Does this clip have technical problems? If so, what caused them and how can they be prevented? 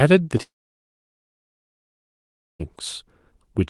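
Yes. At 0.37–0.41 s there is short concealed packet loss. About 20 ms of audio arrived too late for the decoder, and the receiver patched the gap by extending the preceding sound before crossfading back, leaving a brief smear. A larger jitter buffer or forward error correction would prevent this.

From 0.42 s to 2.61 s a long network dropout cuts out roughly 2.2 s of audio. The last sound trails off briefly, then about 2.1 s of silence follows before the audio resumes with that stretch missing, likely caused by a network stall. Stable connectivity with redundant routing would prevent this.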